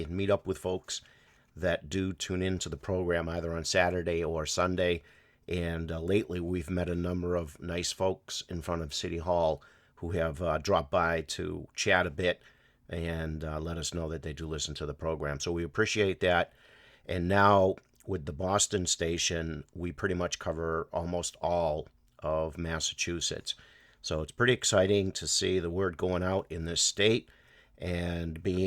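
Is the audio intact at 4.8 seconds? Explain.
Yes, the audio plays through cleanly at 4.8 seconds, with no dropout, click, distortion or other fault at that moment.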